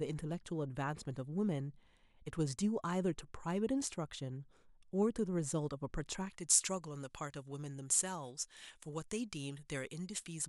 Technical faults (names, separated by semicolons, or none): pre-emphasis left on